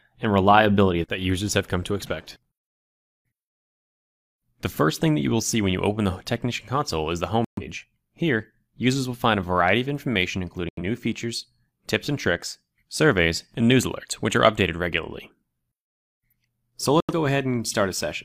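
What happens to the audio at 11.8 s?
Nothing goes wrong at 11.8 s; the audio there plays through intact, with no dropout, click, distortion or other fault to be heard.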